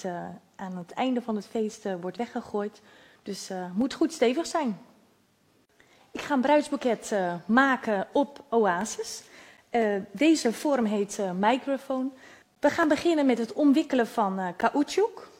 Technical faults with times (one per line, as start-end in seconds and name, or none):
9.57 gap between stream segments
12.55 gap between stream segments
14.61 gap between stream segments